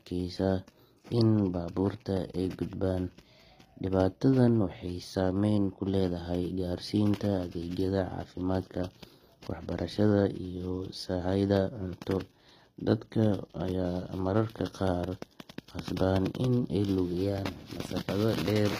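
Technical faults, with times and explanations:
Throughout, HE-AAC compression: plainly audible damage, with sibilants gritty and metallic and nothing above 15.4 kHz. The treble is likely rebuilt by spectral band replication, with lower bands copied upward under a coarse envelope, which fits a low bitrate around 24 kbps.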